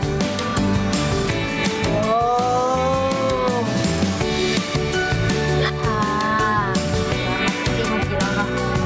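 Gain pumping runs through the whole recording: the level drops each time a loud sound arrives and climbs back afterwards, swinging by around 10 dB, which brings loud and soft passages closer together and leaves the sound squashed. The likely cause is input gain set far too high for the microphone, with a fast limiter or compressor clamping down on every loud sound. The audio has passed through a call's microphone processing, whose high-pass filter trims the lowest bass and which leaves nothing above 8 kHz.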